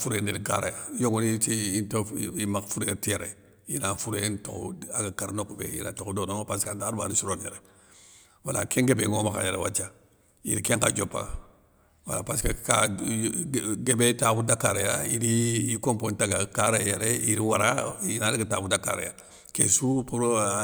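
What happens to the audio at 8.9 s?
Nothing goes wrong at 8.9 s: the speech there plays through intact, with no dropout, click, distortion or other fault.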